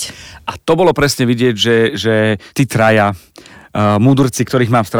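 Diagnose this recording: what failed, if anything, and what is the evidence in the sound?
Hard clipping runs through the whole speech clip at a converter or sample-format stage: the signal is driven about 5 dB past full scale, so a small share of samples, near one or two percent, are cut flat. Crackle lands only on peaks, unlike codec distortion's smeared, level-independent texture.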